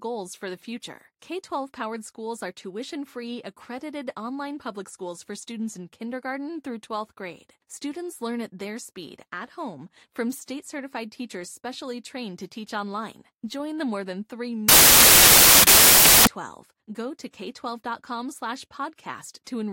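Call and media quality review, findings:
Samples built from the wrong bytes, 14.69–16.27 s: sudden loud, harsh broadband noise replacing the audio. Decoder or file reader misassembling sample bytes, so low bits dominate. Spectrogram: flat full-band wash; waveform: dense noise block.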